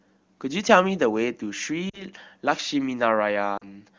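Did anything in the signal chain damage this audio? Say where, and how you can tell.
Yes. Lost AMR speech frames on the radio link, at 1.89 to 2.04 s and 3.57 to 3.69 s: the speech smears and fades rather than cutting hard, which fits two concealed 20 ms frames each time.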